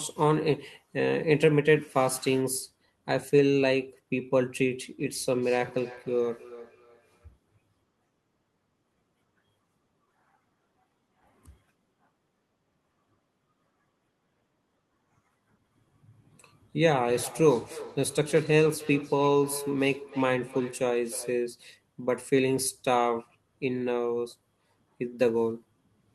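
Feedback echo between two devices occurs from 5.00 to 7.33 s and from 16.83 to 21.56 s. A nearby device replays the call into another's microphone, so the speech returns thinner and ringing roughly every third of a second, peaking about 19 dB, then about 15 dB, below the speech.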